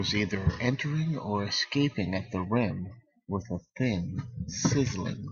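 No technical faults can be heard anywhere in this speech recording. There is no moment that calls for a timestamp or an explanation.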